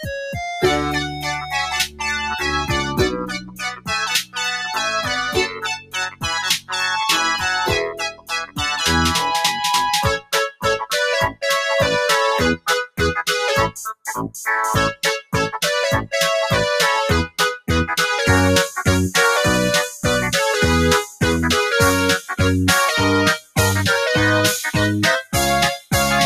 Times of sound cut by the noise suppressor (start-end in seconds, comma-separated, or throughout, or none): 1.07-1.53, 1.86-2.01, 3.21-3.90, 5.48-6.25, 7.92-8.60, 23.40-23.57